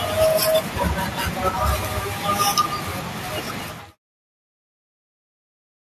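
No technical faults can be heard in this recording.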